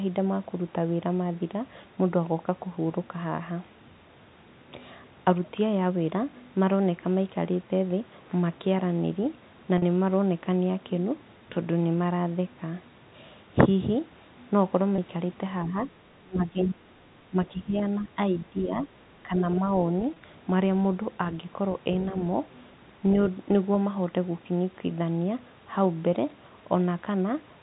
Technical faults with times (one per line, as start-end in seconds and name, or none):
9.78-9.82 packet loss with pitch repetition
14.96 packet loss with pitch repetition
15.65-15.75 speech suppressed in double talk
16.23-16.77 speech suppressed in double talk
17.30-18.83 speech suppressed in double talk
17.79-17.83 other side's voice leaking through
19.23-19.42 speech suppressed in double talk
20.14-20.16 packet loss with pitch repetition